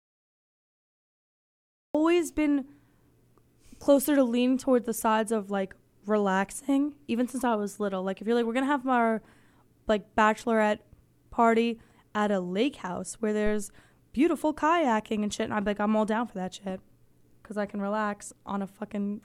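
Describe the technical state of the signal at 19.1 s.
At 19.1 s the speech signal is intact, with no audible fault at that moment.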